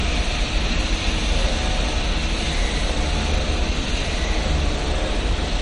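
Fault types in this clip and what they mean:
MP3 compression: The sound has a watery, swirling quality, and nothing is present above 10.5 kHz. The likely cause is a low-bitrate MP3 encode, roughly 40 kbps. Short of bits, the encoder cut the treble at a fixed point and dropped weaker frequency components that flicker between frames. On a spectrogram this shows as a flat ceiling at 10.5 kHz with a patchy, holed texture below it. The waveform shows little of it.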